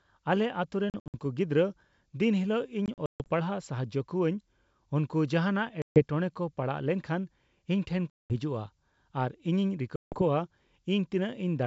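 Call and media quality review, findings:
Packet loss on an ADPCM call, five bursts: 0.90–1.15 s (160 ms lost, before "ᱜᱤᱫᱽᱲᱨᱟᱹ ᱫᱤᱱ"), 2.86–3.30 s (220 ms, longest run 140 ms, before "ᱯᱟᱲᱦᱟᱜ ᱥᱟᱦᱟᱡᱽᱡᱳ"), 5.82–6.03 s, 8.10–8.34 s, 9.96–10.22 s. Sharp-edged full-band blanks on the spectrogram, flatlines in the waveform. Decoder predictor and step size desync, giving slightly distorted speech on resumption. G.722 wideband coding still reaches up to 7 kHz outside these bursts.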